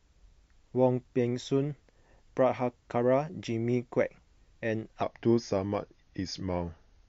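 From 5.03 s to the end, a section at the wrong speed: playback likely ran against a mismatched clock, slowing the audio to 0.893 times its recorded rate. Pitch drops with it, by about two semitones, so the speech abruptly turns deeper and more dragging.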